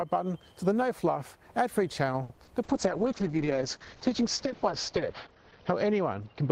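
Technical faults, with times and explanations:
2.23–2.31 s short stall from a late packet: the sound holds for 60 ms while the buffer waits, then resumes where it left off. Unlike a loss, nothing goes missing.
2.35–2.39 s and 2.45–2.49 s short concealed packet loss: each brief smear is a filled gap. About 40 ms, then 20 ms, of real audio is skipped outright, not merely delayed.
2.65 s to end call bitrate drop: the encoder falls from 32 to 7 kbps and the bandwidth narrows from 20 kHz to 6 kHz. The sound turns muffled and rough for the rest of the clip, lowest for about 2.6 s, rather than glitching briefly.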